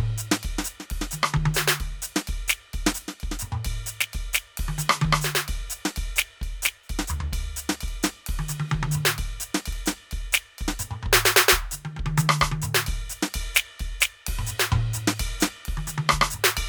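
Nothing technical stands out in this music clip; it just runs along without any audible fault to point at.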